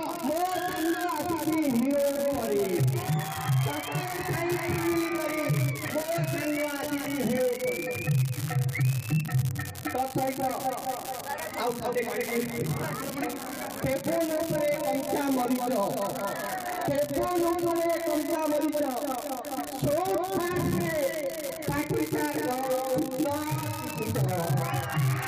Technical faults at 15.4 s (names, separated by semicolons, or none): unreliable data bit